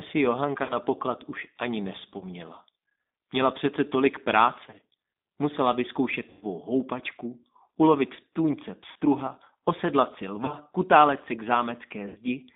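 From start to finish the speech runs through a G.729 codec (the G.729A variant) at 8 kbit/s, and it's plainly audible. The line only carries roughly 200 Hz to 3.7 kHz, so there's no air or sparkle up top. Because the codec rebuilds the voice from a vocal tract model, a pitch predictor and a handful of pulses per frame, rather than sending the waveform, it comes out rough and a bit synthetic.

On top of that there's VoIP packet loss concealed by the speech codec, at 0.63 to 0.75 s, 2.18 to 2.24 s, 4.67 to 4.80 s, 6.30 to 6.44 s, 8.92 to 8.97 s, 10.45 to 10.55 s and 12.09 to 12.17 s. When packets go missing, the decoder keeps playing its last pitch and filter and turns the level down as it goes, so each gap becomes a stretched tone or coloured noise that fades. The one at 6.30 s is the longest, around 110 ms missing, which fits about eleven 10 ms frames. Most of the others are 30 to 60 ms. 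The 4.67 s event is different: short dropouts spread across about 120 ms. Each gap also leaves the voice weak or distorted for a moment after it returns, since the decoder has to rebuild its state.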